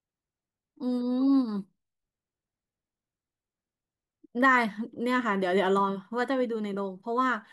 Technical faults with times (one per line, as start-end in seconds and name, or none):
none